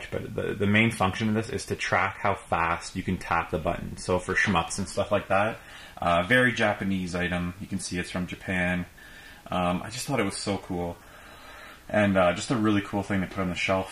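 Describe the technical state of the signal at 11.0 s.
At 11.0 s the signal is intact, with no dropout, distortion, or other fault present at that moment.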